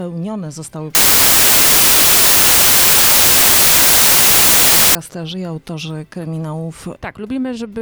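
Between 0.95 and 4.95 s the sound is swamped by loud, harsh broadband noise. That is samples built from the wrong bytes: for those four seconds the reader is assembling each sample out of misaligned or swapped bytes. The busy low-order bits end up driving the top of every value, so the actual signal turns into noise.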